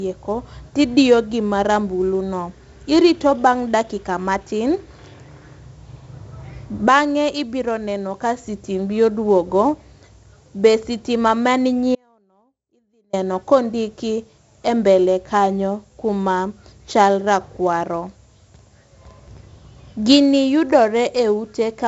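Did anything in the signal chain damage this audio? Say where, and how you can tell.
Yes, two things. The first is at the codec stage: the whole clip carries the gritty hiss of 4-bit ADPCM compression, and it's heavy. The grit rides on the speech level, thickening on loud syllables and crunching on sharp onsets where the adaptive step can't keep up. Nothing reaches above about 7.7 kHz. That dull top end, plus the grain, points to a 16 kHz ADPCM stream at around 64 kbps.

The second is an audio dropout to a faint residue, from 11.95 to 13.13 s. For about 1.18 s the speech cuts out abruptly, without any fade, and all that's left is a faint trace sitting about 40 dB below normal level. It then snaps back just as suddenly. Because the path stayed live through the gap, the likely cause is the wanted signal being lost upstream while everything downstream kept running.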